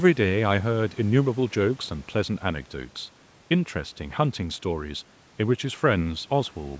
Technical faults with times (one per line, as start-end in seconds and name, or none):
none